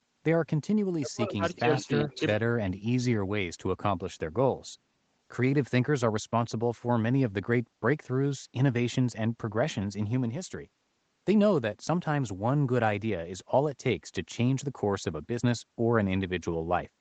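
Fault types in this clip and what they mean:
Speech suppressed in double talk: From 0.93 to 1.43 s, the speech sinks sharply for about half a second. At its deepest the level falls by roughly 40 dB, close to silence. The likely cause is both sides talking at once. The echo canceller could not tell this talker apart from the loudspeaker echo. It then pulled the whole signal down rather than let echo through.
Echo leak: Just after, from 1.47 to 1.6 s, a faint delayed copy of the speech appears. It sits about 25 dB below the main speech and trails it by 388 ms. It is a brief scrap, not a sustained echo. This is likely the far side's loudspeaker sound reaching its microphone. The echo canceller there did not fully remove it, so a piece was sent back.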